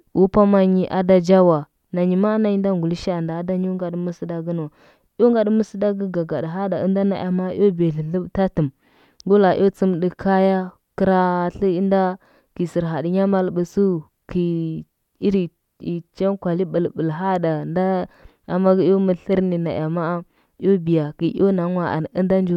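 No technical faults can be heard anywhere in this recording.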